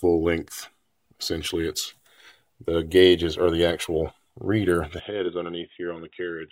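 At 5.00 s the sound abruptly turns dull and boxy, with no gap, and stays that way to the end. Everything above 3.8 kHz vanishes, the level drops by around 10 dB, and a faint new background noise appears well beneath the signal. The likely cause is the input switching to a poorer device. On a spectrogram the upper band is cut off flat at 3.8 kHz from that point, and the waveform visibly shrinks in height.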